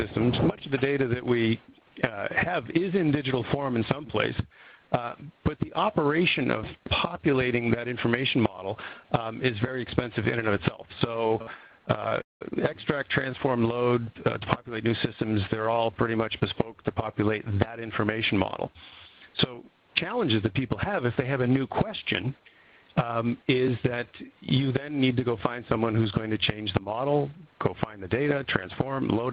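At 11.27 s the first short stall from a late packet appears. A packet missed its slot and the jitter buffer ran dry. The receiver held the last sound for 27 ms until the data came. It then resumed at the same point. Two more follow. At 11.42 s the hold lasts 44 ms. At 12.09 s it lasts 27 ms. Each one sounds like a brief smear, with a faint buzz or dip. Nothing is lost. The delay simply grows each time.

From 12.21 to 12.43 s the audio freezes, as on a call. The sound hangs, fades out, and then 170 ms of near silence follows. The whole gap is 196 ms. The cause is likely packets held up in transit, which left the jitter buffer empty. When they arrive, playback picks up where it stopped. The result is an inserted pause, not a cut.

From 14.77 to 16.53 s a jitter buffer speed-up follows. The buffer held more audio than it aims for, so the receiver trims it. It cuts out many tiny slices, each a pitch period or so long. 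In total it drops about a fifth of a second. The audio runs at 112% speed, but the pitch stays the same. This stretch sounds hurried.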